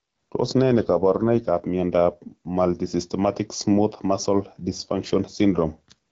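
Gain pumping runs through the whole speech recording. The level breathes, with the gain pulled down by something like 5 dB whenever the talker gets loud. The likely cause is input gain set far too high, with a fast limiter or compressor clamping every peak and releasing in the gaps. Loud and quiet passages end up squeezed toward one level, which gives the sound a flattened, squashed character.

An AMR rate drop follows from 0.72 s to 2.28 s. With no gap and no loss of bandwidth, the speech turns audibly rougher and more synthetic, then recovers its earlier clarity. That pattern points to the AMR-WB wideband codec stepping down from about 12.65 to about 8.85 kbit/s on a weak link, spending bits on error protection instead of detail. Outside that window the codec's light coding roughness matches its normal 12.65 kbit/s rate.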